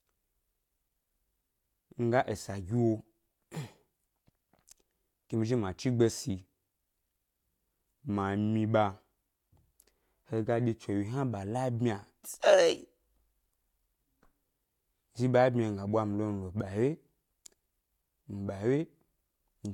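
Nothing in the recording stood out as a technical problem on listening.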